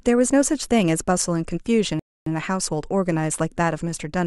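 A rebuffering stall interrupts this speech clip from 1.99 s to 2.27 s. The player exhausted its downloaded audio and halted until more data arrived, so the speech drops abruptly into silence for about 270 ms and then picks up at exactly the point where it stopped. No speech is skipped or repeated. The gap simply inserts roughly a quarter-second of dead air, stretching the timeline by that amount.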